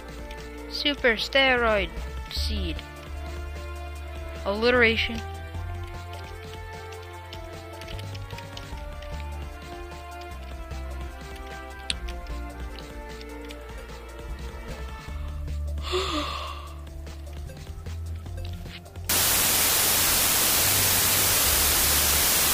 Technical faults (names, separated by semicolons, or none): low bit depth with dither